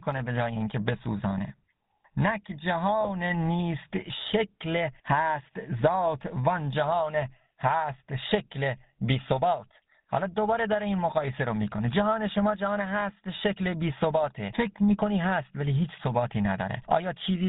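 Throughout, the speech carries the buzzy, gravelly roughness of the GSM full-rate codec, which fits its 13 kbps stream. The codec models the vocal tract and excites it with sparse regular pulses, and nothing passes above 4 kHz. Unlike plain band-limiting, it adds grit rather than just dullness.

From 3.01 to 3.10 s, GSM bit errors break in. Corrupted filter, pitch and gain values garble the decoded spectrum and level, producing a brief squawking, gargling burst about five 20 ms frames long. Its sudden bursty character separates it from the steady codec roughness.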